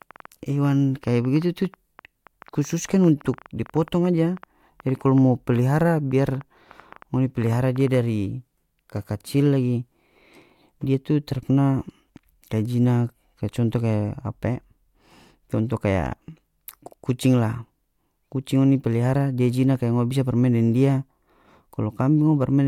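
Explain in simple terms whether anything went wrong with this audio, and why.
From 0.02 to 7.95 s the speech carries a train of clicks. About fifty ticks arrive, roughly seven per second, at an uneven pace. They are as loud as the speech and are heard in pauses too. The likely cause is interference or a faulty connection or power supply.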